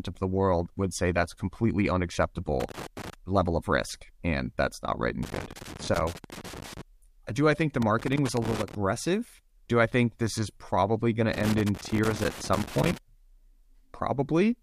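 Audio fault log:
2.60–3.14 s, 5.23–6.81 s, 7.82–8.75 s, 11.33–12.98 s: loose connector crackle. Irregular bursts of scratching crackle, the first just before "level of risk and", others after "and that's not right" and "this is probably going". An intermittent contact keeps making and breaking, chopping the speech.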